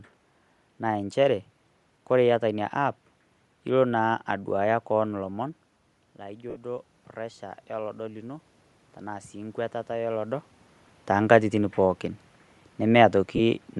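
Throughout, the upper spectrum sounds grainy and breathy, likely from Bluetooth LC3 compression. A spectrogram shows blotchy, noise-filled high bands in short 7.5 ms blocks.

From 4.27 to 10.53 s, just after "ilo naa", the automatic gain rises about 8 dB as the talker moves away. The waveform envelope and room noise swell together gradually.

At 6.50 s, lost LE Audio frames leave a 60 ms noisy smear, which fits eight 7.5 ms frames. It shows as a smeared, flattened spectral patch.

At 13.36 s, a second 30 ms loss leaves a similar, briefer smudge.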